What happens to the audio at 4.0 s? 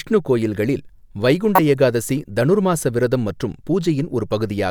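Nothing goes wrong at 4.0 s; the speech plays through that moment intact, with no dropout, click or distortion.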